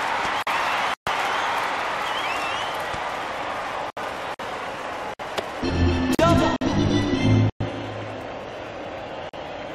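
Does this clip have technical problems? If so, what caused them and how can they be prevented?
Yes. Short holes open in otherwise continuous sound at 0.43–0.47 s (about 43 ms), 4.34–4.39 s and 6.56–6.61 s (about 50 ms each). They are gaps at joins of encoded pieces. The encoder's start-up delay and final-frame padding were left in when separately encoded segments were butted together, and the codec softens their edges. To prevent this, trim encoder delay and padding using the stored gapless metadata, or encode the material as one continuous stream.

Abrupt dropouts fall at 0.94–1.07 s (128 ms), 3.90–3.97 s (67 ms), 5.14–5.19 s (57 ms), 6.15–6.19 s (43 ms), 7.50–7.61 s (108 ms) and 9.29–9.33 s (43 ms). These are blocks of digital silence: zeros written most likely when the output buffer wasn't filled in time. The two 43 ms holes fit a 2048-sample buffer at 48 kHz. To prevent them, give the audio thread higher priority or a larger buffer, and make sure processing finishes within each buffer period.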